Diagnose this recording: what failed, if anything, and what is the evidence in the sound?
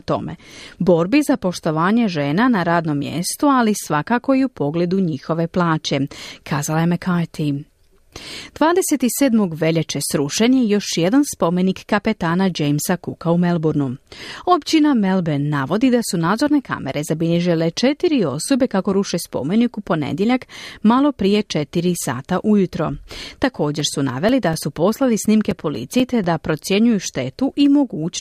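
The disc playback stage failed: a scratch corrupted more data than error correction could rebuild, once per revolution, so the player concealed those samples. The result is CD scratch ticks in the speech from 23.56 to 26.73 s, fourteen short clicks of a few milliseconds each, about four a second, of uneven strength.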